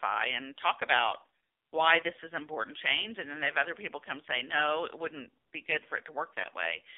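Throughout, the speech carries AMR narrowband mobile codec damage. Nothing passes outside about 300 Hz to 3.6 kHz. Heavy coding makes the voice buzzy and synthetic, which fits the low 5.9 kbps mode.

From 6.42 to 6.47 s there are lost AMR speech frames. The decoder repeats its last settings at lower gain, giving a brief dip. That fits a single lost 20 ms frame.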